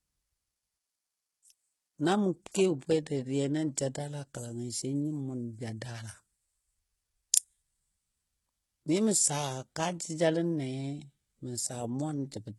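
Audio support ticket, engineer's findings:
Whole clip: speech treble heavily gritty and lispy, s sounds metallic, nothing above 11.8 kHz. Likely HE-AAC compression at a very low rate, fits roughly 16 kbps; top end rebuilt by band replication from copied lower bands, harmonics misaligned.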